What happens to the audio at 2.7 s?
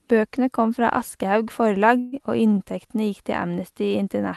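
A jitter buffer slow-down runs from 2.22 to 2.88 s: the receiver repeats pitch periods to rebuild its reserve, stretching the speech by 83 ms to about 89% speed at unchanged pitch.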